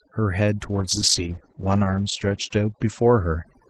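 From the start of the clip, overdone noise removal is audible. The noise reduction was set too aggressively, so individual frequency bands that sit close to its noise estimate are pulled far down or switched off entirely. The background drops and breaks up into twinkling specks, and the quieter parts of the speech are stripped away along with the noise.

At 0.64 s a call bitrate drop sets in and lasts to the end. The encoder's allowance falls sharply, which fits a move from around 32 kbps down to around 12 kbps, and it stays at its lowest for about 1.54 s. The Opus coding becomes coarser, and the audio bandwidth narrows from 12 kHz to 8 kHz. The speech turns rougher and more muffled.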